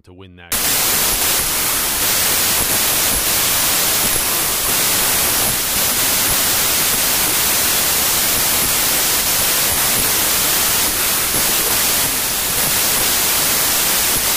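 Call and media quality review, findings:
Wrong sample width, 0.52 s to end. Playback points to 32-bit integer samples read as packed 24-bit, so sample boundaries drift across bytes. Heavy broadband noise with the speech buried beneath it, slowed to 0.75x speed with pitch dropped to match. Probable component: decoder/format negotiation, sample format mismatch between writer and reader.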